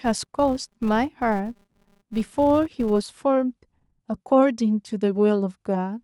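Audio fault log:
0.0 to 3.08 s, filter restarted on every block: each block starts the filter from silence, so a small transient lands every 5 ms and builds a 200 Hz buzz riding the speech level.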